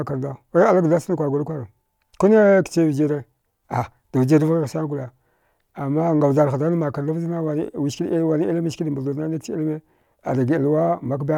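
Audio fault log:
6.73–11.38 s, resampler restarted on every block: each 10 ms block is converted on its own, so every block edge gets a small error, heard as a 100 Hz buzz riding on the speech. Unlike mains hum, it disappears in pauses because it needs signal.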